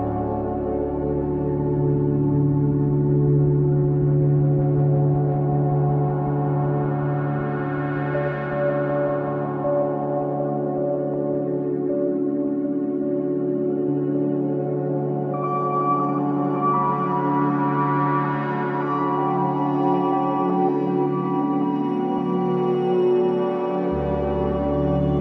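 No faults are audible anywhere in the clip.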